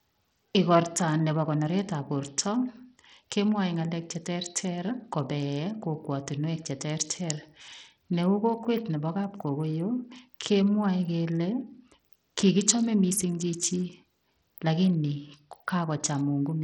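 Bluetooth SBC compression runs through this speech clip from start to finish, heavy throughout. The treble is thin and unstable, and a gritty, grainy noise with aliasing artefacts sits on the voice the whole way. The likely cause is SBC coding with a small bit pool, which fits a bitrate of about 64 kbps: the weak upper sub-bands get few or no bits, and the rest are quantised so coarsely that the noise shows.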